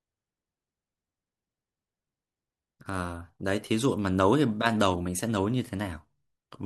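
Listening to the speech in this recording, nothing stood out as a technical problem at any point.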